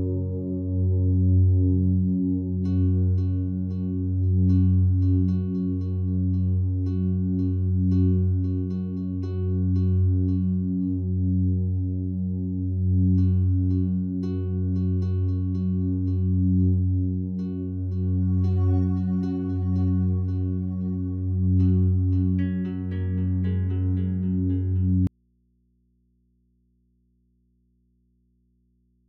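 At 25.07 s the sound cuts out abruptly in an audio dropout to a faint residue lasting to the end, likely from the signal feed breaking while the input stayed live. Only mains hum remains, roughly 45 dB down, showing as a collapsed waveform and thin low-frequency lines on a spectrogram.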